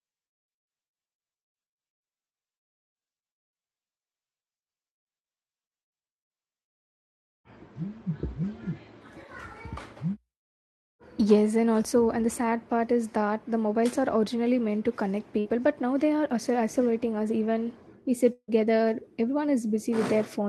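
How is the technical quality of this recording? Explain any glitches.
The recording has two network glitches, both near the end. The call codec's coding noise and its cut-off of everything above about 12 kHz are audible throughout.

At 15.39 to 15.47 s, right after "originally meant to connect", a burst of packet loss interrupted delivery. The receiver filled roughly 53 ms by extending and fading the last sound into a brief buzz or hiss, and about 60 ms of audio is skipped before "but now they are" resumes.

At 18.33 to 18.50 s, the sound is stretched into a fading buzz or hiss for about 150 ms, then goes silent for about 50 ms. This is likely a long network dropout, and about 160 ms of audio never returns.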